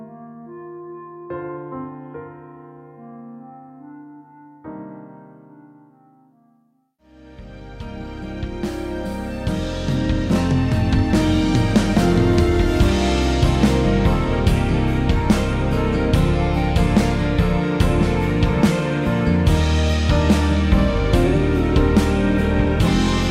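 Nothing goes wrong anywhere in the audio, so there's simply no technical fault to point to.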